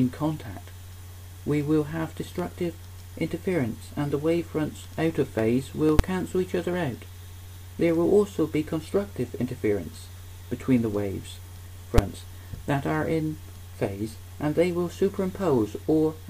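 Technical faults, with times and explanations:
5.99 s and 11.98 s: invalid numbers at full scale. At each point a calculation went out of range and produced infinite or invalid values, which the output clamped to the largest possible sample value. The signal is pinned flat at one extreme value, far beyond the audio's peaks, for about 5.8 ms, which fits a 256-sample processing block. Because the block is so short, the jump onto the rail and the return off it merge into a single loud bang rather than two separate pops.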